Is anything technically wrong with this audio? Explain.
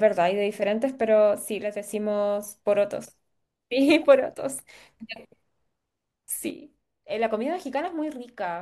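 Yes. The speech drops abruptly by about 6 dB from 1.63 to 1.88 s, and again from 6.50 s to the end. The likely cause is one channel dropping out. With one stereo side gone, the mono sum loses half its shared signal, so the level sinks suddenly.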